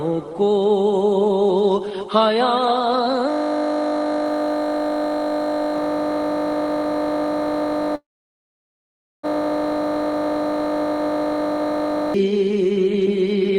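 From 3.30 s to 12.14 s the sound collapses into a steady 50 Hz buzz, one 20 ms fragment repeating hundreds of times. This is a system hang loop: the computer or driver froze while the audio hardware kept cycling through the same short ring buffer.

At 7.95 s, inside that buzz, the audio stalls into a brief fading tail and then about 1.2 s of silence before resuming at 9.25 s with nothing skipped, only 1.28 s of added delay. This is likely a call audio freeze, where delayed packets emptied the jitter buffer and the receiver filled the wait.

From 13.43 s to 13.58 s the sound suddenly runs about 151% fast at unchanged pitch, hurried. This is a jitter buffer speed-up: the receiver trimmed roughly 70 ms of pitch-period pieces to work off accumulated delay.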